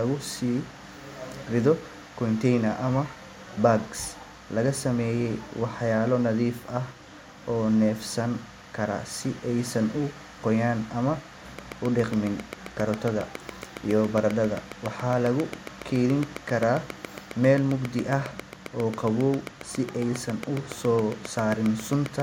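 A train of clicks runs from 11.59 s to 22.21 s in this speech clip, at about 7.35 clicks per second and evenly spaced, roughly seventy in all. They tick clearly over the speech and through the pauses, peaking about 15 dB above it, likely from interference or a faulty connection injecting repeated pulses.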